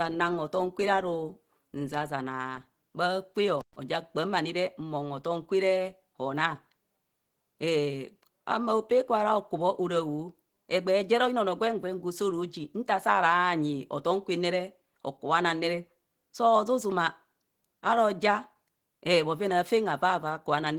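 From start to finish the speech sounds muffled, hoarse and grainy. The likely cause is Opus compression in its hybrid speech mode, at around 16 kbps. At 3.59 s an intermittent contact opens briefly, like a loose plug. The sound drops out for about 117 ms, with crackle at each edge, returning by 3.76 s.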